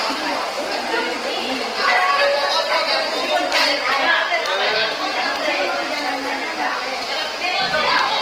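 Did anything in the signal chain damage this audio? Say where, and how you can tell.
Yes, at the codec stage, all the way through the audio. Tones come out noisy, rough and grainy rather than swirly, and the damage is plainly audible, which points to Opus compression in its CELT music mode at a low rate, likely around 16 kbps. With few bits, the encoder keeps each band's energy but refills the detail by folding lower bands or injecting noise. On a spectrogram, bands look smeared and speckled rather than holed, while content still reaches about 20.1 kHz.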